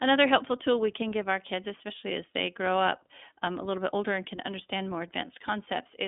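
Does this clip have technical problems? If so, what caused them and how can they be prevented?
Yes. There is iLBC codec damage throughout: speech is confined to roughly 200 Hz to 3.6 kHz and sounds rough and synthetic, consistent with 20 ms frames coded independently at about 15.2 kbps. Prevent it by using a wideband codec such as Opus for the call.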